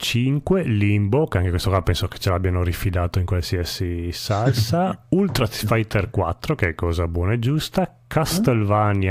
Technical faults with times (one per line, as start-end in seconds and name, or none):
none